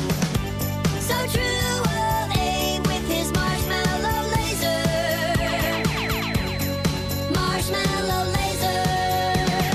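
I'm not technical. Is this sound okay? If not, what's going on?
No. From about 5.55 s to the end, a thin, steady high whistle near 4 kHz sits quietly behind the sound, wavering slightly. This is a feedback whistle, likely caused by a loudspeaker's output leaking back into the microphone and hovering on the edge of howling.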